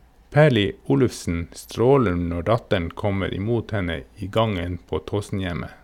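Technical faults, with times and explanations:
Nothing technical to flag here; the speech comes through without anything worth pointing at.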